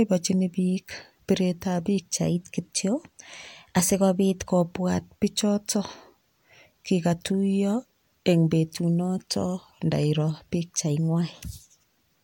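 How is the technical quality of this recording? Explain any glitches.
The speech is marred by two sudden pitch-and-speed jumps. From 2.16 to 4.49 s, ending just before "kobwat pichoto", and from 10.80 to 11.74 s, just after "kikatuiyo eng betunoto ndairo", the audio runs 6.34% fast and about 106 cents (a semitone) sharp, then snaps back. It is likely a drift correction step, a clock-matching rate jump. On a spectrogram the harmonics shift upward abruptly.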